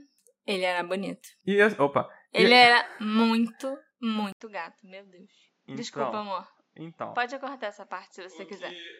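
At 4.32 s there's a brief gap of about 80 ms, then the speech drops roughly 10 dB, loses everything above 7.6 kHz and gains faint background noise, likely an input switched to a poorer device.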